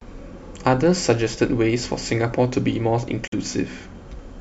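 At 3.27 s the speech cuts out and stays silent until 3.34 s, when it resumes mid-stream rather than picking up where it stopped. This gap is most likely a Bluetooth dropout: audio packets failed to reach the headphones in time, the receiver discarded them, and it output silence until valid data arrived. The roughly 46 ms of missing material fits two lost packets.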